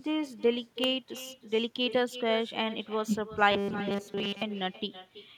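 From the start, the speech carries an echo with no canceller: a quieter, thinner copy trails each phrase by roughly 300 ms, at about 14 dB below the direct speech. The far end's loudspeaker is feeding its microphone, and nothing removes that return path.

At 0.84 s a sharp snap sits on top of the audio, lasting only a couple of milliseconds. It is most likely an electrical switching spike, an arc from a nearby switch or discharge coupling into the line.

From 3.5 to 4.4 s the speech turns into a rigid metallic buzz at 200 Hz that only loosely tracks the speech. This is robotic sound from repeated short buffers, likely caused by fresh audio arriving too seldom. Essentially all of that stretch is a repeated fragment, which fits a 5 ms buffer.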